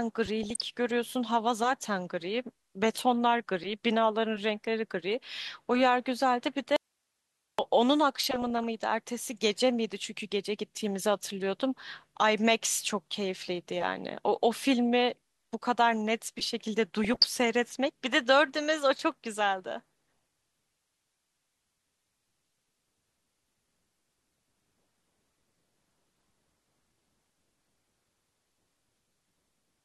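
Right at the start, from 0.43 to 0.62 s, there's DAB burbling: weak reception let a small fraction of a percent of bits slip past error correction into the MP2 data, putting short blips of noise in single sub-bands. It returns at 8.22–8.67 s and 17.04–17.29 s. In between, at 6.76 s, there's an audio dropout to a faint residue: the speech cuts out abruptly for 0.82 s, leaving only hiss about 50 dB down, likely because the signal was lost while the path after the break stayed live.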